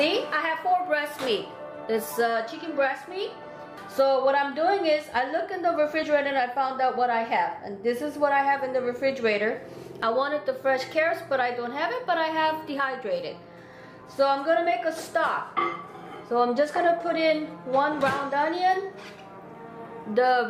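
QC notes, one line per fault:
2.04, 6.03, 10.03 and 18.01 s: audio missing between chunks. Each is a tiny skip of a few milliseconds, with both sides joined directly instead of leaving a silent gap as a dropout would. The 4-second spacing likely points to chunk boundaries during recording.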